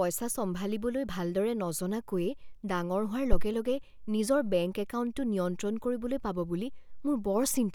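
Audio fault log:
3.33–3.50 s, phantom power thump: a deep, low-frequency thump peaking at about -10 dBFS and decaying within 40 ms. A supply switched on or off on the live input, and the sudden voltage step passed through the coupling capacitors as one low pulse.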